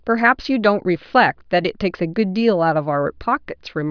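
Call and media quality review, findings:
No findings: the call and media quality review turns up nothing to report in this speech clip.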